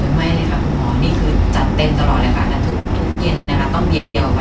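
A speech clip carried over a call path whose band stops at 8 kHz, which fits a G.722 wideband codec. Between 2.70 and 3.49 s, packets kept arriving late, so the jitter buffer ran dry four times. The receiver stretched the last sound to fill about 233 ms in all, the longest gap 110 ms. The result is repeated stalls (stutter): nothing is lost, but roughly 29% of that stretch is concealment, and the speech drags and catches. From 3.97 to 4.16 s there is a call audio freeze, likely caused by packets held up in transit and leaving the buffer empty. The receiver filled 171 ms by continuing the last sound until it faded into about 50 ms of silence. The speech then resumes where it stopped, pushed 171 ms later.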